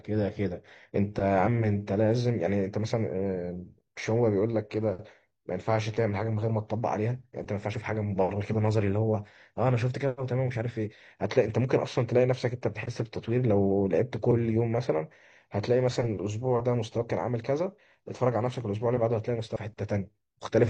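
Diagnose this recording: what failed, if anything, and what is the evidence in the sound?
Codec stage: compressed frames skipped at 1.43, 7.70, 9.11, 14.27 and 19.52 s, each a brief jump where the speech skips ahead by one to several 42.7 ms frames.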